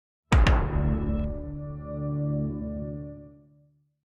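No technical faults can be heard anywhere in the clip.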